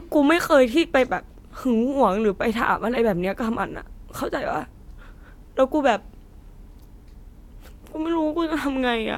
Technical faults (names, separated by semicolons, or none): none